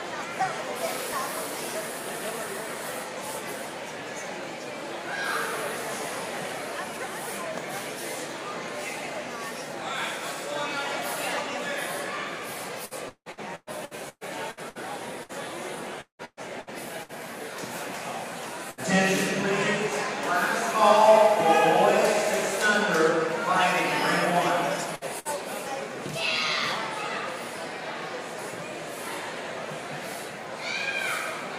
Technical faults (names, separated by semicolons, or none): repeated packet loss (robotic sound); burst of packet loss